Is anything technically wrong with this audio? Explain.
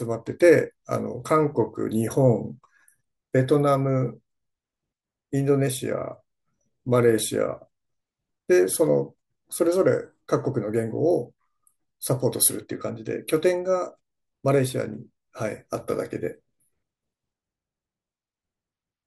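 No, nothing is technically wrong with this speech recording. No technical fault can be heard at any point in the clip.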